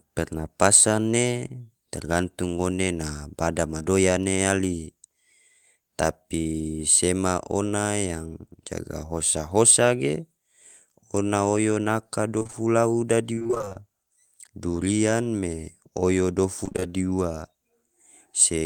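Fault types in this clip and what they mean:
short concealed packet loss: gaps of about 20 ms near 1.47 s and 3.79–3.87 s (two back to back there), patched by extending the preceding sound, so each gap is a brief smear, not a choppy run.
repeated packet loss (robotic sound): clustered losses at 12.39–12.55, 13.35–13.77 and 16.65–16.89 s, with nearly half of each span patched, giving a choppy sound with pieces missing rather than single ticks.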